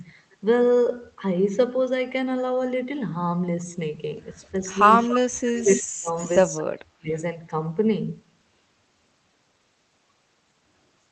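From 4.99 to 5.19 s a faint, delayed copy of the speech trails the talker by about 263 ms. This is an echo leak, likely from a far-end loudspeaker whose echo canceller let part of the signal back into the microphone. It sits about 10 dB below the speech. On a spectrogram it appears as a weaker duplicate of the same harmonic pattern, shifted a quarter-second later and capped, like everything else here, near the 8 kHz limit of the call path.

Between 5.49 and 6.13 s the talker's level collapses in pieces, totalling about half a second, while the other side is also speaking. This is speech suppressed in double talk. The canceller could not separate near-end speech from echo and likely ducked both together. The waveform shows the envelope pinched sharply, with the deepest dips about 30 dB down. On the spectrogram, bands of energy thin out or vanish, especially at the top.

Inside that stretch, from 5.58 to 5.81 s, a second echo scrap returns with a delay of about 264 ms and sits roughly 15 dB down. 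It shows up as a dim, offset smear overlapping the gaps.

From 6.19 to 6.38 s a third, quieter echo follows at about 265 ms delay, roughly 20 dB below the speech. It is barely visible as a faint ghost trace.

From 6.57 to 7.10 s the double-talk suppression returns. About 0.4 s of the talker's sound is chopped down again, with the same deep dips in the waveform and washed-out patches on the spectrogram.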